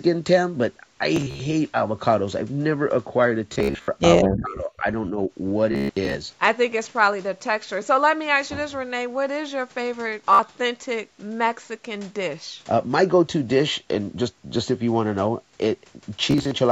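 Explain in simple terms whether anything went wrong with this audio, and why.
A few things went wrong. Bluetooth stutter hits at 1.16 to 1.40 s, 3.53 to 3.88 s, 5.72 to 6.16 s, 10.33 to 10.39 s and 16.31 to 16.52 s. Chunks of audio arrived late or got lost, so the receiver kept replaying its last little slice. You hear a buzzy, machine-gun repeat, and then the speech jumps ahead. The worst one is around 5.7 to 6.2 s.

From 4.29 to 4.85 s the speech drops way down for about half a second. That's likely speech suppressed in double talk: the echo canceller probably got confused by both sides talking at once and muted the talker.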